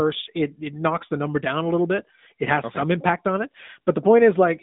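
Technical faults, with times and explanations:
Throughout, AMR narrowband mobile codec: the speech is confined to roughly 150 Hz to 3.7 kHz, with nothing above 3.8 kHz. At 10.2 kbps the vocal-tract model is driven by a pitch predictor and a set of pulses in each 5 ms. That leaves a plainly audible buzzy, synthetic edge.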